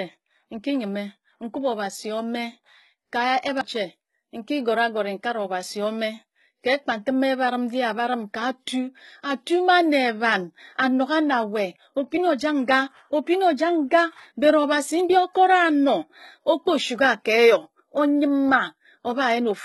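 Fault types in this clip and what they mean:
HE-AAC compression: Throughout the speech, s sounds come out gritty and lispy with a metallic edge, and nothing reaches above 11.8 kHz. This is likely heavy HE-AAC coding at around 16 kbps, which copies lower bands upward to fake the treble instead of coding it.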